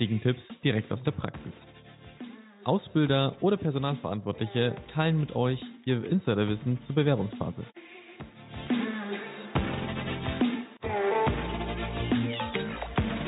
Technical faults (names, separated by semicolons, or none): none